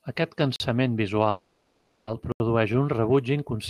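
Speech recording with two blocks of digital silence and one call audio freeze. The first block of digital silence runs from 0.56 to 0.60 s, a 40 ms silent gap. The second runs from 2.32 to 2.40 s, lasting 80 ms, just before "un rebuig". In both, the signal cuts out and returns with no fade, and the gap itself is heard as a short hole. This points to an output buffer that was not filled in time. From 1.29 to 2.09 s there is a call audio freeze. For about 0.8 s the speech stops advancing and the last sound is stretched into a synthetic buzz-like continuation that never reaches silence. When the audio resumes, nothing has been dropped, but everything after it arrives about 780 ms later. That pattern likely comes from packets held up in transit, leaving the jitter buffer empty while the receiver covered the wait.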